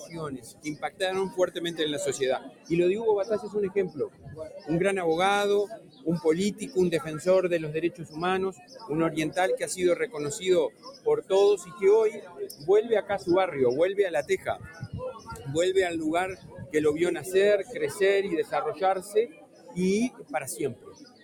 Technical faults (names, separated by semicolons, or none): noise suppressor applied to music or sounds; sound cut by the noise suppressor